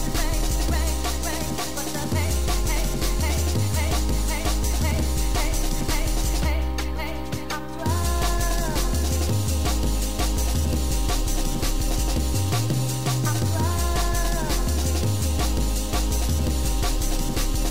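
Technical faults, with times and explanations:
Nothing to flag here; there's no technical fault to point to anywhere in the audio.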